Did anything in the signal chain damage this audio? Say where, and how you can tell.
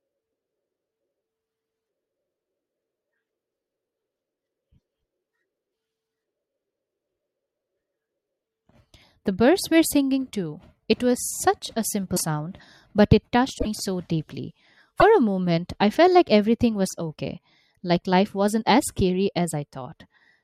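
Yes, at the codec stage, most likely a broken MP3 bit reservoir. After frames went missing, the following frames reached back for borrowed data and decoded someone else's bytes instead. The sound skips forward with a brief glitch at 12.16–12.21 s after "was such a", 13.57–13.66 s between "but it" and "so deeply", and 14.99–15.03 s between "so deeply" and "a moment I felt". Each lasts one to a few frames of about 24 ms.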